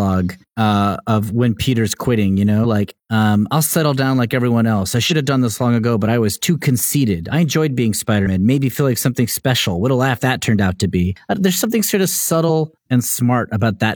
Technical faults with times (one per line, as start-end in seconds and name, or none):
2.60-2.66 damaged data in a compressed stream
5.07-5.12 damaged data in a compressed stream
8.22-8.28 damaged data in a compressed stream
12.45 damaged data in a compressed stream